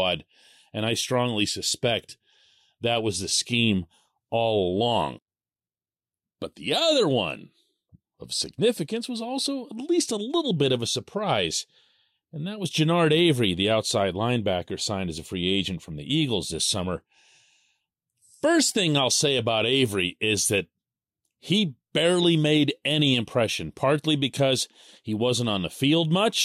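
Speech recording, with no technical fault audible anywhere in it.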